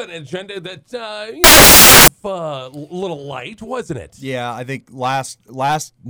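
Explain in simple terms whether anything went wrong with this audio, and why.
The player assembled samples built from the wrong bytes between 1.44 and 2.08 s, so the sound turns into loud hiss there, like static.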